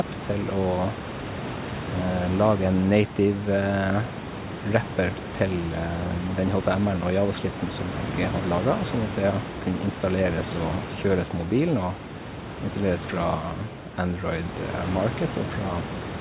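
Nothing here is going wrong: the speech comes across steadily, with the room's own background noise sitting about 10 dB beneath it and the call line carrying everything up to 4 kHz and nothing above, just as a G.711 mu-law path at 64 kbps would.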